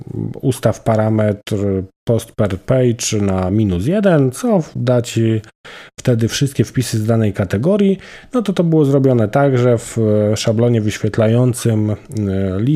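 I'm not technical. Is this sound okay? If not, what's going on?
Yes, nothing in this recording stood out as a problem when I listened to it.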